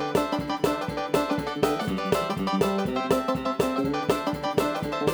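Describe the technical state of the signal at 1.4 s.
At 1.4 s the audio is being read two samples at a time, and this double-speed fault runs through the whole clip. The reader treats each pair of samples as a single frame, as if the stream held two channels or samples twice as wide. Playback therefore runs at twice the speed and sits a full octave, 12 semitones, too high.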